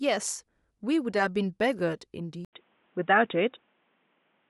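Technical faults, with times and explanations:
2.45 s to the end, input switched to a poorer device: the speech turns dull and boxy after a short gap of about 80 ms, likely because recording moved to a narrower-band microphone or headset profile. On a spectrogram, energy above 3.8 kHz vanishes abruptly at that point, and a new faint noise floor appears, well below the speech. The waveform shows a brief flat gap, then a loudness step of a few decibels.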